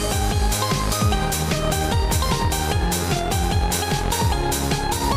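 No technical faults can be heard anywhere in the audio; the signal stays steady and intact throughout.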